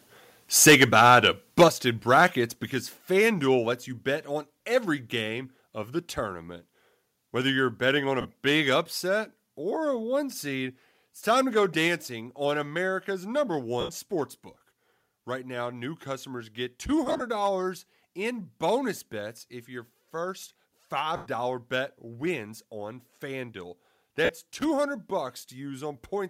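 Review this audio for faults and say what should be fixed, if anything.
Microphone overload at 0.61 to 1.27 s, 1.59 to 1.64 s and 2.17 to 2.25 s: peaks overshoot the converter's limit by about 9, 7 and 3 dB, so their tops are sheared off into harsh crackle, likely from excessive input gain. Set the microphone gain lower so that the loudest syllables peak well below full scale.

Microphone volume stepped down at 0.68, 1.68, 2.7, 3.72, 8.82 and 11.88 s: the level drops abruptly by about 2, 6, 4, 2, 2 and 2 dB, likely the call software cutting input gain after clipping. Turn off automatic gain adjustment once a sensible fixed level has been set.

Lost LE Audio frames at 8.21 s (37.5 ms), 13.80 to 13.89 s (82.5 ms), 17.07 to 17.22 s (97.5 ms scattered across 135 ms), 21.16 to 21.27 s (97.5 ms) and 24.24 to 24.29 s (45 ms): the decoder repeats the last spectrum with scrambled phase, smearing the sound into noise that fades. 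Keep the Bluetooth link short and unobstructed, and away from 2.4 GHz congestion.

Loose connector crackle at 24.59 to 24.65 s: an intermittent contact chops the signal, producing a brief, irregular scratching burst. Reseat or replace the cable and clean the connector contacts.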